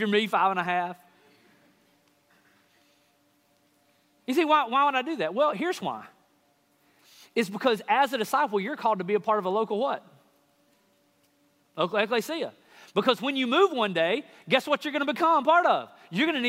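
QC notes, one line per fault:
No faults found. Nothing in the audio calls for a QC entry.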